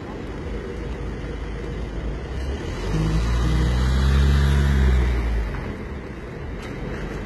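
A recording of sounds carries heavy HE-AAC compression damage throughout, likely from a very low bitrate near 16 kbps. Unlike a plain low-pass, the treble stays bright up to a cutoff at 11.8 kHz, but it is rebuilt from copied lower bands, so high detail sounds gritty and metallic rather than simply dull.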